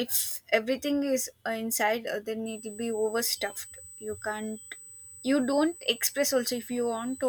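From 2.46 s to the end, a USB whine sits steady at 8 kHz, about 20 dB below the speech. Microframe current from the bus leaks into the audio path.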